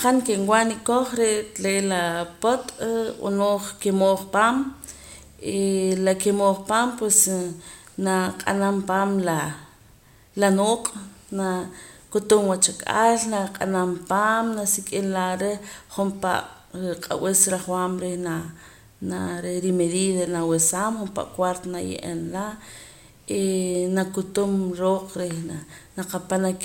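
No technical faults can be heard anywhere in the recording. There is nothing in the signal that needs a timestamp or an explanation.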